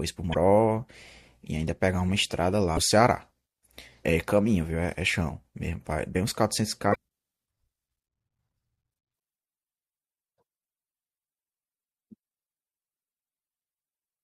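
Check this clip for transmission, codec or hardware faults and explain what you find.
The speech carries damaged data in a compressed stream, heard as five short bursts at 0.30–0.36 s, 2.73–2.79 s, 4.01–4.05 s, 6.91–6.96 s and 9.16–9.18 s. Each lasts roughly 30 to 55 ms. At each point corrupted bytes make the decoder misread frames and lose sync until it finds the next valid frame header. The result is a brief chirp or squawk.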